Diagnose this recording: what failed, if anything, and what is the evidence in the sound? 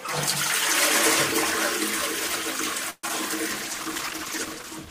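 A network stall most likely emptied the jitter buffer, causing a call audio freeze from 2.90 to 3.04 s. The receiver stretched the last sound into a fading buzz or hiss for about 130 ms, ending in a brief silence. The sound then resumes where it stopped, delayed rather than lost.

Short concealed packet loss follows at 3.08 s. About 20 ms of audio never reached the decoder. Concealment extended the preceding sound briefly and crossfaded back, leaving a quick smear where a fragment of sound is missing.

A call bitrate drop at the codec stage begins at 3.51 s and lasts to the end. The bandwidth estimate fell and the encoder went from 48 to 14 kbps. The sound becomes coarser and duller, with a watery, muffled top end.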